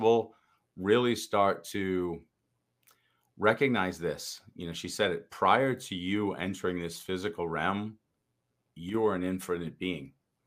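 At 8.89 s the speech suddenly drops in level by about 6 dB. The dip lasts 50 ms, ending at 8.94 s, and then the full level returns just as abruptly. It sounds like a brief notch, a quick step down and back up rather than a fade. The likely cause is one channel dropping out of a stereo feed that is summed to mono. The shared content loses half its contribution, and anything carried only by that channel vanishes.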